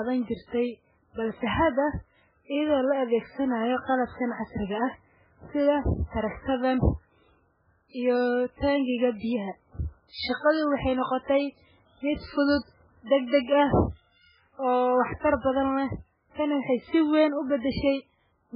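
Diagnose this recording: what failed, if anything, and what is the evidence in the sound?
Codec stage, likely MP3 compression at a very low bitrate such as 8 kbps: the speech sounds heavily watery, and a spectrogram ends abruptly at 5.2 kHz.

Pre-echo, also from the codec: from 15.19 to 15.23 s a hiss spreads 40 ms ahead of an attack. The waveform shows noise before the onset.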